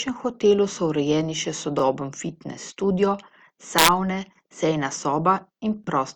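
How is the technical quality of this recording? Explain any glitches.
The recording has two technical problems: a codec fault throughout and two brief stutters.

Throughout, the speech has a compressed character. This is likely low-bitrate audio saved at a high bitrate: a 48 kbit/s Opus encode re-saved as 256 kbit/s MP3, which cannot restore lost detail.

At 1.79 s and 5.84 s, overlapping chunks cause a stutter. The first comes after "hotelu so urejeni še" and before "fitnes studio". The audio arrives in 2-second chunks, and each join repeats about 25 ms, heard as a short click-like hiccup.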